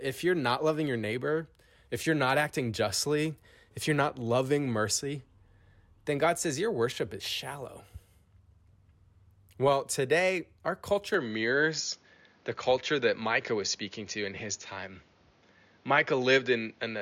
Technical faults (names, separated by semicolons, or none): input switched to a poorer device